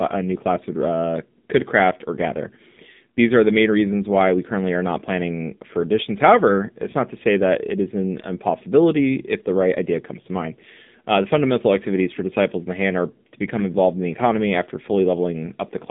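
From start to finish the speech sounds thin, buzzy and synthetic, confined to roughly 200 Hz–3.6 kHz with nothing above 3.7 kHz. This is the AMR narrowband mobile codec rebuilding the voice from a vocal-tract model at low bitrate, which fits the 7.4 kbps mode.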